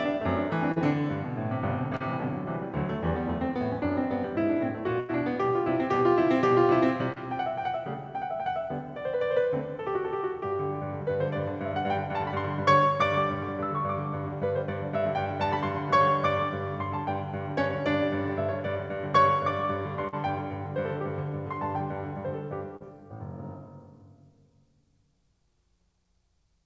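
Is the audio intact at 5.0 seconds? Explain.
No. A burst of packet loss hits at 5.00–5.11 s in this music. The receiver stretches the last received sound for about 85 ms, fading it into a held tail, then playback resumes with roughly 80 ms of the music skipped.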